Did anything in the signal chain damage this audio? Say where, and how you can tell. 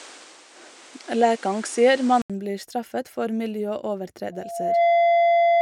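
Yes. For the first 2.30 s the speech sounds duller and boxy, with nothing above 10.5 kHz and background noise sitting roughly 30 dB under it. At 2.30 s there is a gap of about 80 ms, after which the top end opens up, the noise changes and the level shifts by around 5 dB. That points to an input switched to a poorer device at the driver or device-selection stage, likely a narrower-band microphone or headset profile handing over to the better one.

From 4.32 s to the end of the clip at 5.62 s, a single 684 Hz tone rises out of the speech over roughly half a second and settles at about 10 dB above it. This is a loudspeaker feedback squeal, formed outside the electronics in the acoustic path between playback and capture. The microphone is hearing its own output through the speaker, and at 684 Hz the loop's gain exceeds unity, so that frequency keeps reinforcing itself until the system can push it no further.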